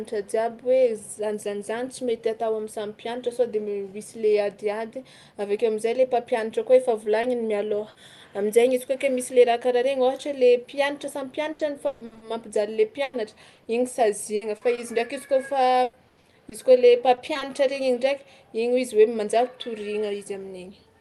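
A short concealed packet loss at 7.21 to 7.25 s in this speech recording leaves a brief smear. About 20 ms of audio never arrived in time, so the receiver patched the hole by extending the preceding sound and then crossfaded back into the real signal. Speech passes through a call codec with its top end stopping near 12 kHz, which fits an Opus stream at roughly 32 kbps.

A burst of packet loss follows at 7.89 to 7.97 s. Here about 60 ms went missing in a row, and the decoder stretched the last sound across the gap while fading it down. A voiced sound becomes a held buzz, an unvoiced one a dying hiss. When the real signal returns, it picks up further along, with the stretch in between gone.

Repeated packet loss, heard as robotic sound, runs from 11.5 to 17.4 s. Eighteen separate holes, the longest about 140 ms, together remove roughly 880 ms, about 15 percent of that stretch. Each gap is filled by extending the previous sound, and the next drop arrives before the speech settles. 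The result is a choppy texture with fragments of the speech missing throughout.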